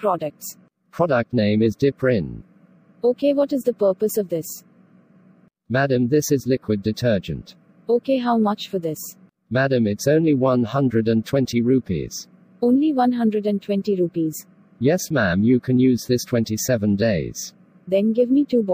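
No technical faults can be heard anywhere in it.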